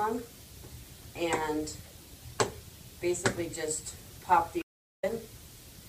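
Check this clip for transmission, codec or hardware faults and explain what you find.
One fault turns up, late in the clip. From 4.62 to 5.03 s an audio dropout to silence blanks about 410 ms, likely a lost input written as silence: a flat waveform line and an empty spectrogram gap with no room tone.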